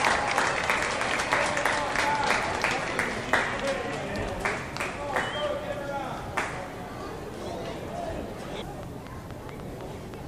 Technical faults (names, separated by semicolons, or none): train of clicks